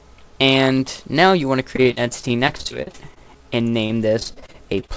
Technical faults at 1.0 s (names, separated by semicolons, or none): none